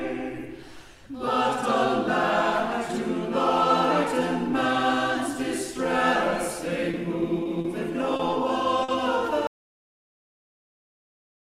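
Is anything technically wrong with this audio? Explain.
Yes, there are two kinds of fault.

Short stalls from late packets occur at 6.91, 7.43, 7.61, 8.16 and 8.83 s. Each time a packet arrived after its playout slot, so the jitter buffer ran dry and the receiver held the last sound for 20, 20, 30, 30 and 50 ms before resuming where it left off. Nothing is lost. Instead, the sound briefly sticks with a faint buzzy smear, and the playback delay builds up after each stall.

An audio dropout to silence begins at 9.47 s and runs to the end of the clip, about 2 s. The sound cuts off mid-flow into silence with no room tone, so whatever followed is gone. The likely cause is a lost input, such as a disconnected device, a failed link or an accidental mute, while the recorder kept writing silence.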